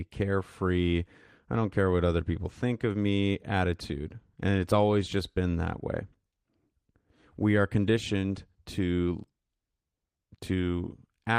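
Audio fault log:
No audible faults detected.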